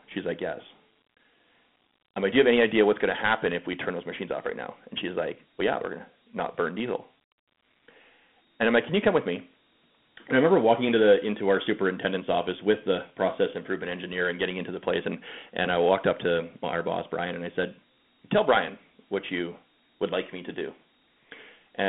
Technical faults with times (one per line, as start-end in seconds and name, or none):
0.00-21.89 Dialogic VOX ADPCM